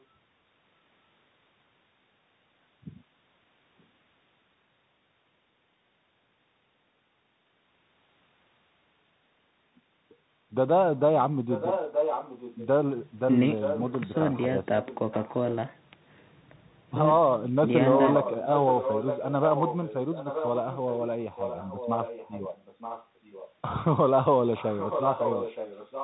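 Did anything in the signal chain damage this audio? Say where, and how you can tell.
Yes. At the codec stage, the Bluetooth CVSD headset codec runs throughout. Nothing passes above 3.8 kHz, s sounds are scratchy, and a granular hiss sits under the speech. Its one-bit, 64 kbps delta step can't keep pace with loud high sounds, so they distort. That grit and hiss separate it from a plain low-pass filter.

In call processing, an echo leak puts a copy of the speech about 0.92 s late at 0.00–0.04, 11.47–12.67, 13.61–14.15, 14.84–15.55, 18.1–23.53 and 24.55–26.04 s. It is nearly as loud as the speech in places, quieter elsewhere, and faint at the very start. The cause is likely an echo canceller leaving loudspeaker pickup behind. Unlike reverb, it is one discrete, fixed-delay repeat rather than a decaying tail.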